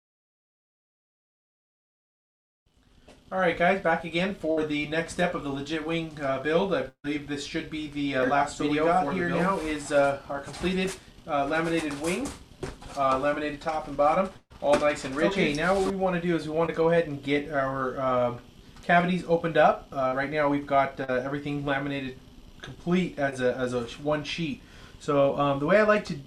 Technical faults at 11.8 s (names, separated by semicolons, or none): none